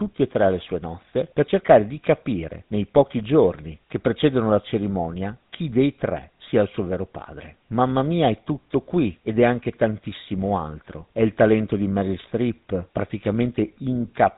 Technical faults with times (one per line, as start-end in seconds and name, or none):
0.00-14.37 GSM full-rate codec